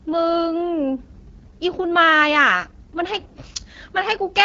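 AMR wideband (HD Voice) codec damage runs through the whole clip. The speech is rebuilt from a pulse-excited vocal tract model with little detail to spare, so it sounds rough and raspy, which fits one of the lowest rates, around 8.85 kbit/s. Nothing is present above 7.5 kHz.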